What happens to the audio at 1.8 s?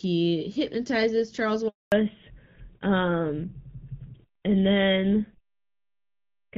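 The speech cuts out: the voice fades away within a few tens of milliseconds at 1.68 s and the line stays silent until 1.92 s, a dropout of 240 ms, after which speech resumes mid-flow with whatever was said in between simply missing. This is a handover gap. The call was being passed from one network to another, and no speech frames reached the decoder during the switch, so there was nothing to play until the new link came up.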